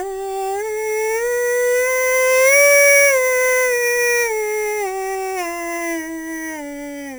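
Throughout the music, imaging from sample-and-hold upsampling adds a metallic fizz about 11 dB below the signal, strongest from 4 to 8 kHz. Each sample from an 8 kHz original was simply repeated up to 44.1 kHz without smoothing. Unlike hiss, the fizz tracks the music's level and slides opposite to its pitch.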